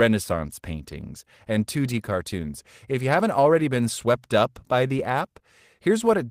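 Clock drift between sender and receiver runs through the whole speech clip. The sender's clock is running about 4 percent fast, so the receiver's jitter buffer keeps filling and must shed audio. On a spectrogram, harmonic tracks show small, irregularly spaced discontinuities rather than smooth continuations.

Repeated timing corrections follow from that drift, from 0.09 s to 6.18 s, trimming the stream to match a 104 percent rate. Each cut is tiny, heard as slight hiccups and an uneven tempo. In the waveform, brief splice points appear at uneven intervals, all removing material.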